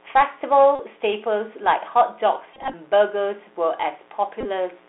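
Throughout the speech, a dimmer, rectifier or unshielded cable is letting 60 Hz switching spikes into the line. The result is a steady, raspy mains buzz with harmonics climbing into the kilohertz range, sitting roughly 30 dB below the speech.

The whole clip has also passed through the Bluetooth CVSD headset codec, which encodes one up-or-down bit per sample at 64 kbit/s with an adaptive step. The audible band is squeezed to 300 Hz to 3.6 kHz. Loud high sounds outrun the step and distort, s sounds turn scratchy, and a granular hiss runs underneath.

At 0.75 to 0.79 s, lost voice packets were replaced by the previous packet's bits, a Bluetooth headset packet repeat. Repeated every 3.75 ms, this becomes a brief buzz near 267 Hz. The same fault returns scattered from 2.54 to 2.74 s, in runs of up to about 20 ms, and again from 4.41 to 4.45 s.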